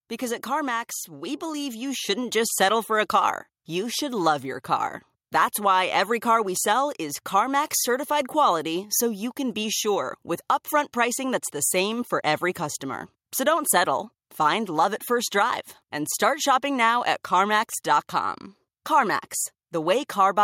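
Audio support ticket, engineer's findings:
Automatic gain rising, 1.08–4.23 s: speech and background noise floor swell together by about 6 dB over roughly 3 s. Probable component: AGC, responding to a low input level by ramping gain up. Waveform: envelope widens steadily. Spectrogram: all bands brighten together, noise included.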